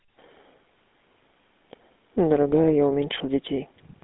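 From the first moment to the last, the speech carries the rasp of the GSM full-rate codec. That coder models the vocal tract and drives it with a sparse, regularly spaced pulse excitation, so what comes out has a buzzy, gravelly edge, and here the damage is plainly audible. Everything sits in a narrow 200 Hz to 3.5 kHz phone band with nothing above 3.7 kHz, which fits the roughly 13 kbps full-rate mode.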